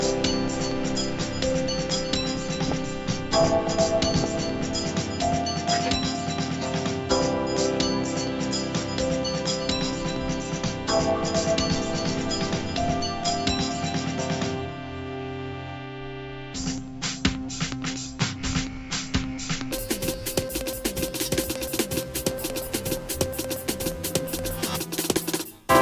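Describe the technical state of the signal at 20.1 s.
At 20.1 s the clip is in a wrong sample rate span (19.72 s to the end): sound runs twice as fast and an octave high, which fits 16 kHz audio played at 32 kHz. Spectrogram content shifts up twofold, and waveform events are compressed in time.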